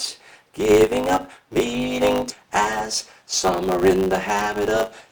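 A steady buzz at 100 Hz runs through the whole audio, and everything plays about 1.07 times too fast while keeping close to its normal pitch. This is a block size mismatch (truncated): one stage writes longer blocks than the next stage reads, consistent with 512-sample blocks, so the tail of each block is discarded. The repeated cut produces the buzz and the shortening. At 2.3 s the audio skips ahead, jumping straight past about a second of material with no gap or fill. Later audio was already queued, and that stretch was dropped either in transit or when the jitter buffer overflowed. From 2.43 to 4.44 s a jitter buffer speed-up makes the audio sound hurried, running at 107% with unchanged pitch. Holding more delay than its target, the buffer trimmed out many short pitch-period-sized pieces, around 150 ms in total.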